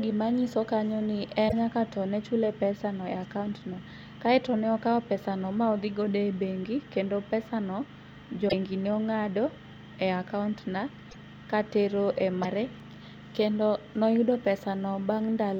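Broken MP3 bit reservoir errors break up the speech at 1.48 to 1.53 s, 8.48 to 8.54 s, 11.09 to 11.16 s and 12.42 to 12.45 s, each a brief chirp or noisy hole of 30 to 70 ms before the audio resumes ahead. The likely cause is dropped frames, each spanning roughly 26 ms. The frame after each gap reaches back into the reservoir for borrowed bits, decodes unrelated bytes, and garbles the first moments after the cut.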